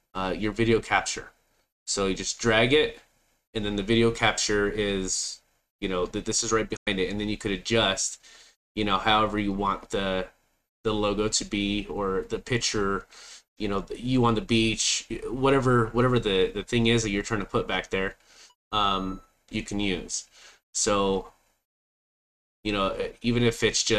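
A digital broadcast dropout hits at 6.76 s. The sound fades out over 8 ms and stays muted until 6.87 s, a hole of about 96 ms, consistent with roughly four corrupted frames, before the programme resumes. On a waveform it is a flat gap; on a spectrogram, a blank vertical band.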